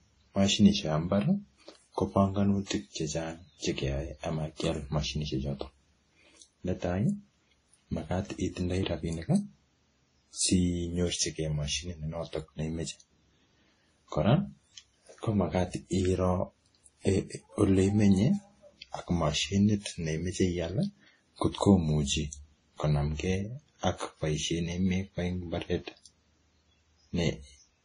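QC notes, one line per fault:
Throughout: transcoding between lossy codecs. The speech has two different sets of compression artefacts on top of each other, with nothing above about 10.1 kHz. The likely cause is an encode at a bitrate that fits roughly 32 kbit/s WMA, followed by a Vorbis re-encode near 26 kbit/s. The second encoder spends its scarce bits reproducing the first one's artefacts and then adds its own, and the lowest band limit in the chain remains.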